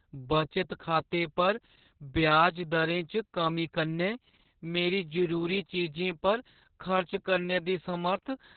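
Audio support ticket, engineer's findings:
Opus voice compression, throughout. Speech muffled and hoarse, slightly robotic, nothing above 4.5 kHz. Narrowband SILK linear-prediction coding with coarse excitation; damage level fits a very low bitrate near 6 kbps, probably long 60 ms frames.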